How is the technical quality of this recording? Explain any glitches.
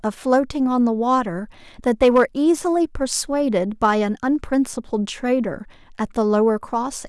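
The recording has one audible glitch, a short burst of overload in the speech.

Hard clipping at 2.02 to 2.23 s: the level runs about 4 dB past what the signal chain can pass, so the waveform peaks are sheared flat. Those squared-off tops add high harmonics, heard as a brief harsh crackle riding the loudest moments of that stretch.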